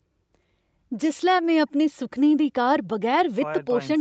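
Nothing stood out on listening to this speech clip.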